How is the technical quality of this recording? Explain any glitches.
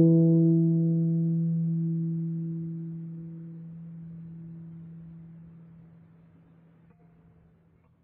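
The recording has no audible technical glitches: the signal stays intact and continuous, with nothing breaking into or disrupting the audio at any point.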